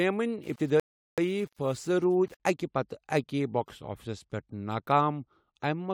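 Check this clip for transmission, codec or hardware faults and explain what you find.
Two faults turn up in the first couple of seconds of this speech clip, and they overlap.

From 0.44 s to 2.40 s there's low bit depth without dither. The speech turns grainy, with a gritty distortion that follows the voice and gets worse as it gets quieter. That's the error from rounding to very few levels, likely an 8-bit signal with no dither to break up the pattern. The grit sits only about 30 dB below the speech.

Inside that stretch, at 0.80 s, there's a rebuffering stall. The audio cuts to silence until 1.18 s, then picks up exactly where it stopped. The player ran dry of downloaded audio and waited for more, so nothing is skipped, but the gap adds 0.38 s to the running time.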